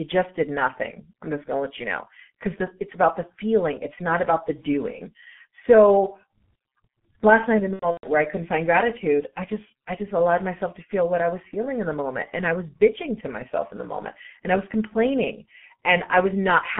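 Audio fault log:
throughout G.723.1 codec: a low-bitrate telephony codec at 6.3 kbit/s over a 150 Hz to 3.4 kHz line, heavily muffling speech, roughening it hoarsely and smearing consonants.
7.73–8.07 s VoIP packet loss concealed by the speech codec: about 210 ms of frames dropped across 300 ms, longest gap 120 ms; the decoder extrapolates, leaving a buzzy or noisy fill that fades, then weak or distorted speech.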